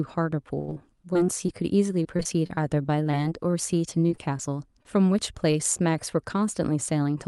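From 0.59 to 5.56 s the speech turns choppy and robotic, broken by about twenty brief dropouts, the longest around 82 ms. This is repeated packet loss: each missing piece is covered by stretching the preceding sound, and the next gap follows soon after.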